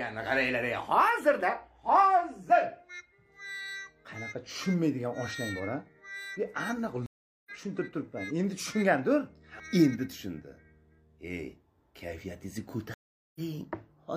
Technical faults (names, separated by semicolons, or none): stream reconnect